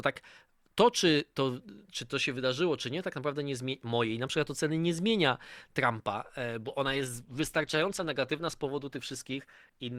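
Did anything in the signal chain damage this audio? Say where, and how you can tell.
Yes. The damage is at the network stage and shows up through the codec. From 6.63 s to the end at 9.98 s, the speech suddenly takes on more codec artefacts. There is no gap or dropout at the switch. That points to an adaptive stream at a lower bitrate. The connection slowed, so the player moved to a cheaper rendition, which fits Opus stepping down from about 64 to 16 kbit/s.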